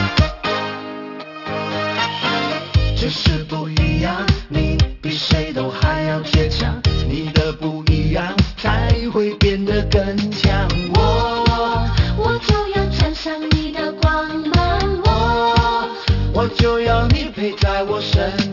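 The audio carries aliasing from start to finish: content above 6 kHz was not filtered before downsampling, which fits a conversion to 12 kHz, so it folds back as unrelated, metallic-sounding tones about 15 dB below the signal. A spectrogram shows energy running hard up to the 6 kHz edge.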